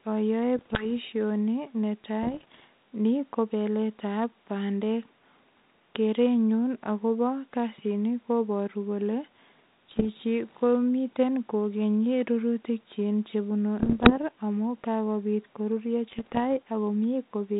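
Bit errors on an ADPCM link corrupt the stream in five bursts: 0.56–0.87 s, 2.23–2.64 s, 9.89–10.07 s, 13.79–14.17 s and 16.10–16.39 s. Roughly one bit in a hundred or fewer is flipped, somewhat more in the 9.9 s burst. Each flipped bit throws off the decoder's step size and prediction, so the error rings on briefly. The speech breaks into pops and rough, gritty bursts with short jumps in level, over a band-limited telephone sound that fits a 32 kbit/s G.726 ADPCM link.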